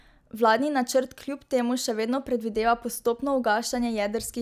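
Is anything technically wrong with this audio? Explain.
No, nothing stood out as wrong on listening to this speech recording.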